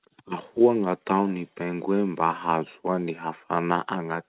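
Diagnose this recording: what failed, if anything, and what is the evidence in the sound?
Nothing stood out on listening: the speech comes through with the narrow, telephone-band sound of a G.711 call path, with nothing above 4 kHz, and no failure can be heard at any stage.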